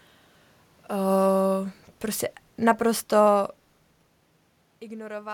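In this speech clip the automatic gain control lowers its gain from 0.95 s to 3.82 s, a drop of about 5 dB. Both the speech and the room noise behind it sink together over those seconds, unlike the level shifts near 0.5 s and 4.0 s, where the talker moves.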